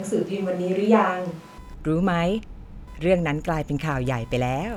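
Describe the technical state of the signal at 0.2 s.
At 0.2 s the speech sounds roomy and hollow, thin in the bass, with background noise about 30 dB below it but no real drop in level. This is likely a switch to a distant microphone, already under way when the clip begins and lasting until 1.58 s.

Under this runs a buzz pulsing at around 500 Hz, about 30 dB below the speech, present for the whole clip. This is computer activity noise: processor, graphics or mouse load shifting the shared ground of the audio circuit.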